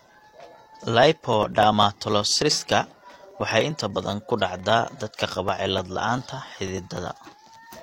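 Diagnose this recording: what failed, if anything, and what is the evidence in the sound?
Periodic USB or driver dropouts from 0.14 to 7.76 s: regular ticks every 0.099 s, where the driver stalls and around a millisecond of speech is skipped each time.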